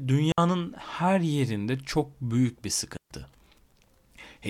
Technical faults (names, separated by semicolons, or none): digital wireless dropout